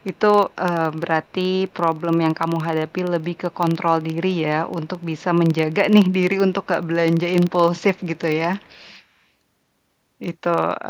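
From the start and through all of the speech runs a steady tick-buzz at 23.4 Hz, the sign of a filter restarted on every block. Each block begins from silence, so a small transient lands at every boundary, which fits a 2048-sample block at 48 kHz. The buzz rises and falls with the speech level. On a spectrogram it shows as faint vertical lines spaced about 43 ms apart. On the waveform it appears as small regular spikes.

An echo leak appears in scraps at 0.0–0.56 s, 1.24–1.32 s, 1.68–2.0 s, 2.88–3.57 s, 4.69–5.23 s, 6.63–6.67 s, 7.81–8.19 s and 8.59–8.98 s. It is a delayed copy of the speech trailing 224 ms behind, very faint at roughly 30 to 40 dB down, and most audible near 8 s. The likely cause is a far-end echo canceller leaving residue that was sent back. On a spectrogram it shows as dim duplicate harmonic traces offset 224 ms.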